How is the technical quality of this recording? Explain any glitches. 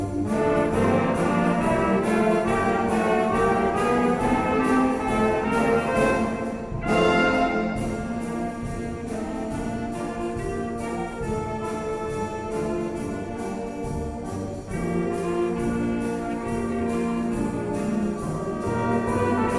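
No glitches can be heard anywhere in the recording: the signal holds steady throughout, with no dropouts, clicks, distortion or other technical disturbances.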